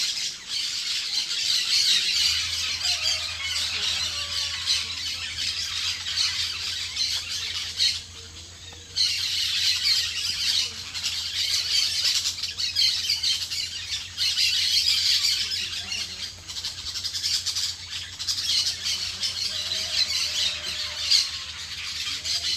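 No technical faults can be heard anywhere in the recording. There is nothing to report at any point in the audio.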